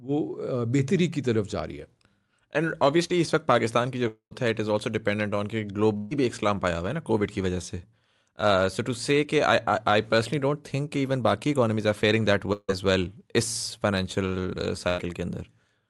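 Speech over a call link, with three kinds of loss fault. Short concealed packet loss sits at 3.07 to 3.12 s, where about 20 ms of audio was bridged by extending the preceding sound. It is heard as a quick smear or wobble rather than any gap, which separates it from the longer faults. A long network dropout is the likely cause of the breaks at 4.08 to 4.33 s and 12.53 to 12.70 s. In each, the last sound is stretched into a fading buzz or hiss before true silence arrives, about 90 ms of it in the first and 20 ms in the second. The speech then resumes with roughly 240 ms and 160 ms missing. A burst of packet loss hits at 5.97 to 6.13 s and 14.88 to 15.00 s, losing about 140 ms and 100 ms. Here the concealment holds and fades the preceding sound across the gap, and the first burst never reaches silence the way the dropouts do.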